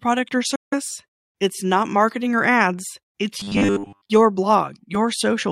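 At 0.55 s the speech cuts to silence for about 0.18 s, resuming at 0.74 s. This is a Bluetooth dropout. Packets likely arrived too late and were dropped. The speech picks up further along, skipping what was lost.

From 3.40 to 4.10 s, right after "marketing or ads it's", the speech turns into a rigid metallic buzz. This is robotic sound from repeated short buffers. A 10 ms chunk is likely looped, forcing a 100 Hz tone. Most of this stretch is repeats, not fresh audio.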